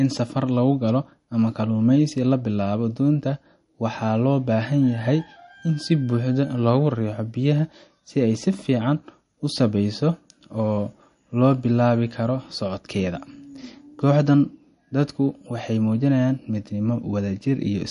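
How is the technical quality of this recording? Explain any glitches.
The quality is noticeably degraded by one fault that runs through the whole recording. Throughout, the speech sounds watery and swirly, with nothing above 10.6 kHz. This is likely MP3 compression at a low bitrate, around 40 kbps. Starved of bits, the encoder cut the treble and dropped weak frequency lines. On a spectrogram this appears as a flat ceiling at 10.6 kHz and speckled, flickering gaps below it.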